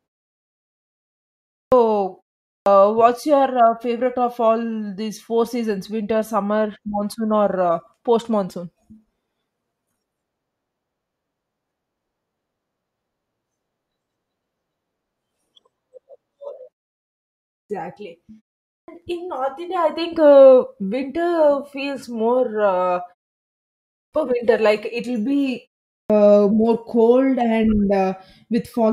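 Speech with a clipped start after a pause, heard six times: at 1.54, 2.47, 17.50, 18.69, 23.94 and 25.92 s. Each time the first 0.18 to 0.20 s of sound is missing. Words jump out of silence without their opening sounds. The preceding pauses run from 0.33 to 1.54 s. The output device goes idle during these gaps and needs a moment to wake again.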